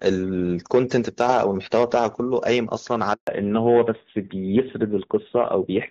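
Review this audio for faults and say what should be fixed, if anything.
Hard clipping runs throughout the speech: peaks are driven about 6 dB past full scale, so a small share of samples are cut flat. Unlike codec roughness, the crackle follows loudness. Lower the gain before the converter.

A handover gap opens from 3.13 to 3.27 s, about 140 ms of silence as frames stop during a network switch. Unlike a dropout, the voice dies away smoothly rather than cutting abruptly. Keeping the call on one network during the exchange would prevent it.

Fallback to narrowband begins at 3.27 s and lasts to the end. Before it, the HD Voice (AMR wideband) sound is clear. After it, nothing remains above 4 kHz, and the dull, rough tone points to narrowband AMR at about 7.4 kbit/s. Unlike a simple low-pass filter, this also adds coding roughness. Ensuring both networks support AMR-WB would prevent the drop.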